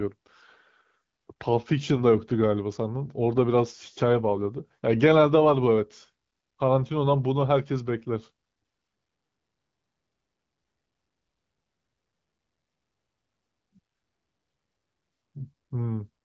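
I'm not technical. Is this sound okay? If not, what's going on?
Yes, nothing stood out on listening to this speech, which comes through as ordinary HD Voice phone-call audio.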